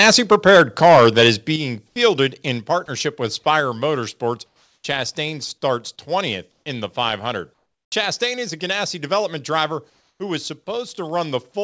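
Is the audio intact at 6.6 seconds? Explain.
No. From 6.52 to 6.66 s, just before "in the", the background becomes comfort noise: a steady, featureless hiss about 3 dB off, likely synthesized while transmission paused. Unlike a dropout, the gap is filled, not silent.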